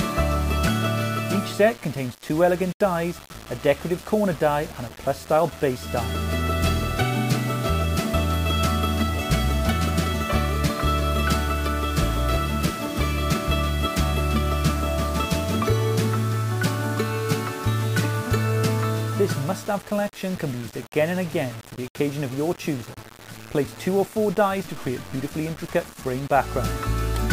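A grainy, gritty distortion runs through the whole clip and tracks the sound itself, roughest in quiet passages. The error sits around 20 dB below the signal, which fits a 6-bit signal rounded without dither, the likely cause being low bit depth without dither.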